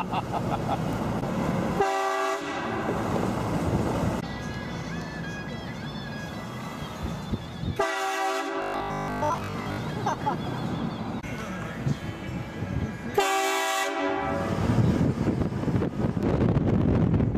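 From 8.62 to 9.78 s the sound turns rigid and metallic, locked onto a steady 50 Hz buzz that still loosely traces the shape of the audio beneath it. This is robotic sound from repeated short buffers. The likely cause is audio arriving too seldom, so playback kept looping its last fragment of about 20 ms, one over the 50 Hz pitch, and most of the real material in that stretch was skipped rather than played.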